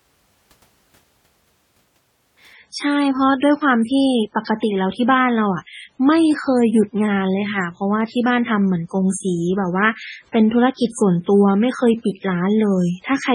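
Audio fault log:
2.54–13.34 s: adaptive stream at a lower bitrate. The speech abruptly loses its top end, with nothing above 10.5 kHz, and gains swirly, smeared codec artefacts, with no gap at the switch. This fits a drop from roughly 128 kbit/s MP3 to about 16 kbit/s.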